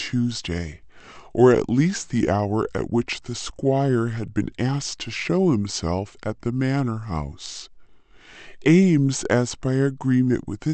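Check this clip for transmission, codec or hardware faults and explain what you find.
The clip has one fault, a wrong sample rate, present throughout. Samples were played out slower than they were captured, with no rate conversion, which fits audio recorded at 44.1 kHz being played at 32 kHz. Speech runs at 0.726 times normal speed and drops about 5.5 semitones in pitch, so it sounds low, drawn-out and sluggish.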